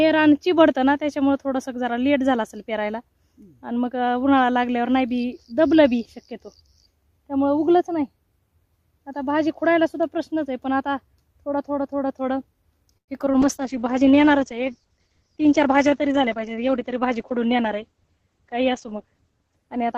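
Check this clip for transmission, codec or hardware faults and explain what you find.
There are four kinds of transmission fault, all bunched into the last seven seconds of the clip.

At 12.97 to 13.10 s there's a call audio freeze. The sound stalls and fades to near silence for about 90 ms, likely because delayed packets drained the jitter buffer.

Right after that come two short concealed packet losses, at 13.26 to 13.28 s and 13.32 to 13.35 s. Each time about 20 ms never arrived and was patched over, leaving quick smears or wobbles.

From 13.43 s to the end there's a call bitrate drop. The encoder fell from 96 to 9 kbps and the bandwidth shrank from 20 kHz to 8 kHz, so everything turns muffled and coarse.

At 15.16 to 16.25 s there's a jitter buffer speed-up. The receiver trimmed about a tenth of a second of pitch periods to cut the backlog, so the sound runs roughly 8% fast at the same pitch.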